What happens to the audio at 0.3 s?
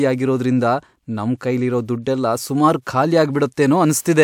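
Nothing goes wrong at 0.3 s; the speech runs through that moment intact, with no dropout, click or distortion to be heard.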